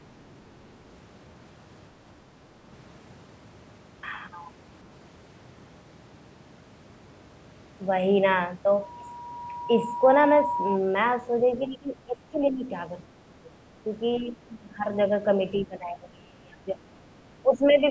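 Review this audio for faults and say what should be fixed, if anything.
The main problem is speech suppressed in double talk, in seven spots: 11.67–12.7 s, 13.1–13.14 s, 13.31–13.52 s, 14.19–14.86 s, 15.63–16.78 s, 17.15–17.23 s and 17.42–17.84 s. The speech sinks or chops out, by around 10–20 dB in most stretches and roughly 30 dB in the 15.6 s stretch. The likely cause is the echo canceller hearing both sides at once, failing to tell this talker from the loudspeaker echo, and ducking everything. A canceller with proper double-talk detection, or less aggressive residual suppression, should stop it.

There's also a small case of the other side's voice leaking through, a brief scrap at 14.18–14.22 s, very faint, about 35 dB below the speech. It sits right at the start of one of the ducked stretches. The likely cause is the echo canceller not fully removing the far-end audio that the loudspeaker played into the microphone. 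Less acoustic coupling, such as lower speaker volume or a headset, plus a well-converged canceller, would prevent it.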